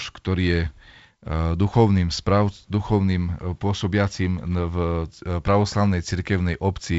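No technical faults are audible.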